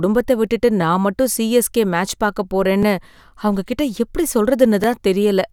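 A brief stutter, heard as a click, interrupts the speech at 0.81 s, 2.83 s and 4.84 s, about 2.01 s apart. These are overlapping chunks: each 2 s chunk begins before the previous one ends, so about 12 ms replays at every join.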